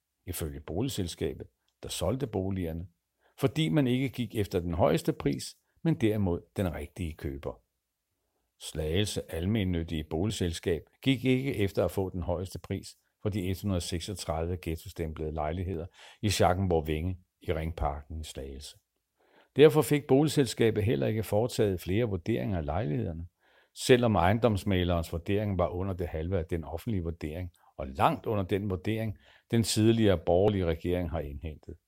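This is a speech clip with four short skips, at 10.3, 12.56, 15.74 and 30.48 s. Each one jumps the sound ahead by around 20 ms, with no gap. The skip at 12.56 s follows "efter at få den", and the one at 30.48 s follows "den vurdering den tidligere". The likely cause is a dropped buffer (overrun), where the hardware overwrote samples before they were collected.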